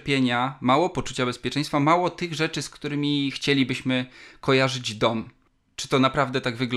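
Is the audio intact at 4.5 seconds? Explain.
Yes, the speech is intact at 4.5 seconds, with no dropout, click, distortion or other break in the sound at that moment.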